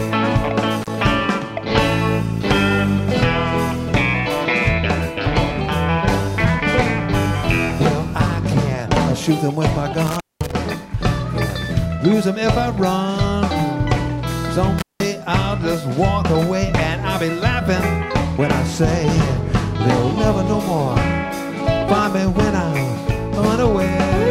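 The audio has three breaks from an intermittent contact, at 0.82 to 0.90 s, 10.07 to 10.53 s and 14.79 to 15.03 s. A loose cable or plug opens briefly, for about 37 ms, 202 ms and 180 ms. The sound drops out, with crackle at the edges.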